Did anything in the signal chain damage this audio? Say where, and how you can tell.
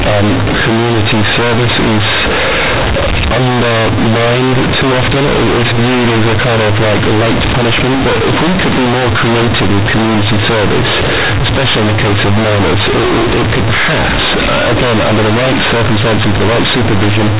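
Yes, at the sample-format conversion stage. The whole clip, start to finish, is companded audio read as linear: the A-law bytes are going straight out as plain 8-bit samples with nobody expanding them. Since A-law packs sign and a log-scale magnitude into each byte, every sign flip throws the output across roughly half its range, so soft syllables come out as big as loud ones. That's the harsh, buzzy, overdriven sound you hear, with heavy noise filling the gaps between phrases. The G.711 telephone coding underneath, at 8 kHz, can still be heard in the narrow band.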